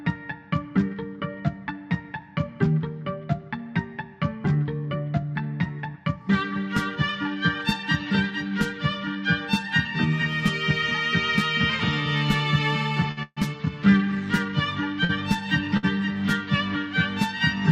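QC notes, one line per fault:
13.11–13.19 s, 15.04–15.11 s, 15.77–15.85 s, short stall from a late packet: each time the sound hangs on one instant a little too long, with a faint buzzy smear, then carries on unbroken. A packet missed its slot and the jitter buffer ran dry, so the receiver stretched the last sound for about 54 ms, 46 ms and 58 ms until the packet turned up. Nothing is lost, but playback ends up that much later each time.
13.23–13.38 s, call audio freeze: just after the first stall, the sound locks up for about 137 ms. The held sound decays into a fading buzz and then about 30 ms of silence before the audio resumes exactly where it stopped. This is likely a longer hold-up of packets in transit that emptied the jitter buffer. The receiver padded the wait rather than skipping ahead, so no material is missing, but a gap and added delay are inserted.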